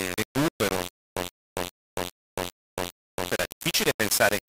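From the first moment to the end, the speech carries heavy grainy distortion that tracks its loudness. The grain sits only a few decibels below the speech itself, and quiet syllables fall apart into crackle. This is low bit depth without dither, likely rounding to about 4 bits. On a waveform, the trace moves in coarse visible steps. A spectrogram shows broadband hash that rises and falls with the speech rather than a steady noise floor.

Between 0.89 s and 3.31 s, a stutter with silent gaps takes over. The same 0.13 s burst plays six times, and each repeat is followed by 0.27 s of digital silence, giving an even 0.40 s rhythm. The likely cause is a stalled stream replaying its last fragment on each retry, so the speech that belonged in that stretch is missing. The waveform shows identical blocks separated by flat silent lines. The spectrogram shows repeating vertical slabs with empty columns between them.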